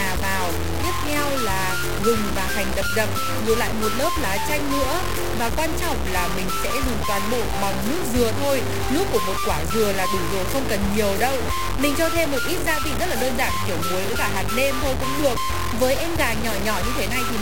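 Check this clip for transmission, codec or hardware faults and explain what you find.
One fault runs through the whole clip: low bit depth without dither. The sound is coarse and grainy, with distortion nearly as loud as the signal. Quiet passages sputter or vanish. The likely cause is truncation to about 3 bits with no dither.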